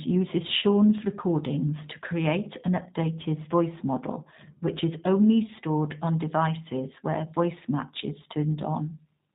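Speech coded throughout with the G.729 codec, whose rough, slightly synthetic texture points to an 8 kbit/s stream; a spectrogram shows nothing above 4 kHz. From 0.59 to 0.64 s, just before "recordings to create", VoIP packet loss concealed by the speech codec leaves a fading extrapolated stretch about 30 ms long, which fits one lost packet; the waveform shows a brief, decaying segment. From 2.67 to 4.82 s, between "recordings to create" and "is only stored on", de-emphasis applied wrongly makes the sound dull and muffled, with a smooth treble slope about 14 dB down at 10 kHz relative to 1 kHz that darkens the upper bands of the spectrogram.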